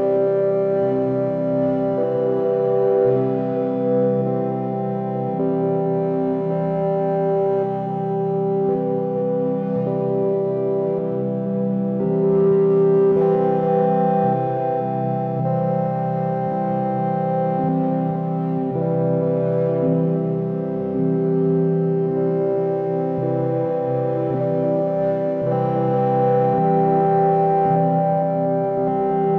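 Nothing in the recording stood out as a technical problem on listening.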